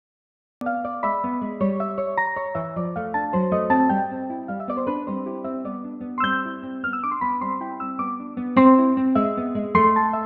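Right at the top there's a cut-off start: the first 0.61 s is silence, and then the audio comes in at 0.61 s already mid-sound, with no natural attack or fade-in. What happened is the capture or stream simply began late, so whatever was playing before that point was never recorded, and the sound jumps straight in partway through rather than building up the way it would if we'd caught its beginning.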